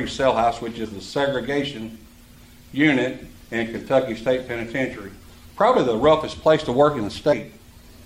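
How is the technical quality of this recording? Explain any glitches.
Two brief glitches are audible. At 0.84–0.86 s and again at 7.32 s, the audio jumps forward: compressed frames skipped, dropping around 50 ms each time, consistent with two frames of 23.2 ms.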